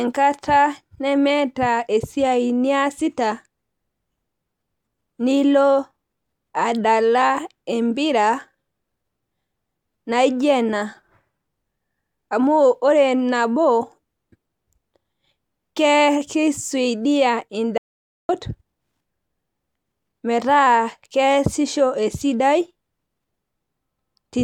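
A speech recording that cuts out abruptly at 17.78 s and stays completely silent until 18.29 s, a gap of about 0.51 s with no room tone or background at all, before the speech resumes mid-flow. This is an audio dropout to silence: the input signal was likely lost for that half second, through a disconnected device, a failed link or an accidental mute, while recording carried on writing silence, so whatever was said then is gone.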